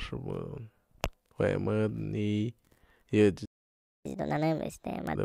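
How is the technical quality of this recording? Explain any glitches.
The recording has two linked playback glitches near its end.

A playback stall from 3.45 to 4.06 s silences the speech for about 0.6 s, likely because the player ran short of buffered data before resuming.

Catch-up at higher speed follows from 4.06 to 5.15 s. The backlog plays at 1.5 times speed, raising pitch by roughly seven semitones before normal pace returns.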